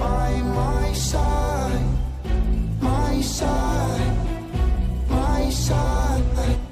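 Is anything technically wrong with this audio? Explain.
Yes. From 6.16 to 6.57 s the audio has frames out of order: two adjacent blocks of about 186 ms each, consistent with runs of four codec frames, play swapped. The result is a garbled flutter. On a spectrogram or waveform, contours break abruptly at those seams, and the total duration is unchanged.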